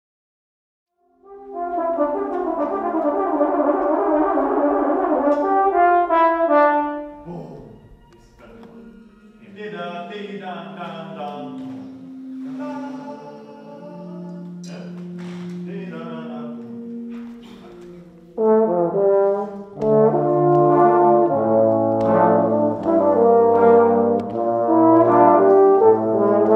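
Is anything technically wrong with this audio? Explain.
No, no technical faults.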